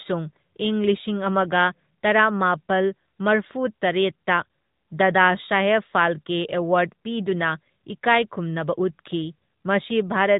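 From start to finish the speech carries the AMR narrowband mobile codec sound. Nothing passes above about 3.8 kHz, and the pulse-driven vocal-tract model gives a plainly audible buzzy, synthetic edge, which fits a 10.2 kbps mode. A plain low-pass filter would dull the top without this coded texture.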